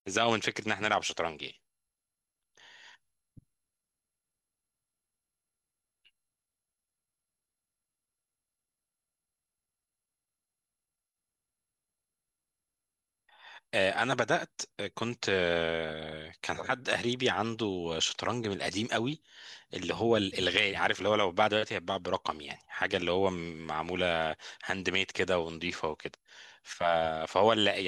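Speech recording with no technical faults to be heard.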